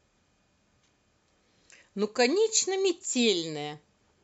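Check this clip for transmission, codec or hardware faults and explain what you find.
Nothing faulty can be heard anywhere in this speech recording.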